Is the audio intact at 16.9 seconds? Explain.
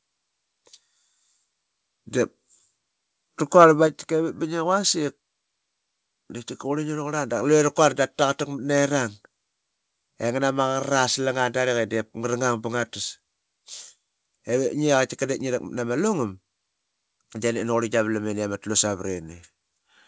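Yes, the speech at 16.9 seconds is intact, carried through a WebRTC call path whose G.722 coding at 64 kbps leaves nothing above 8 kHz.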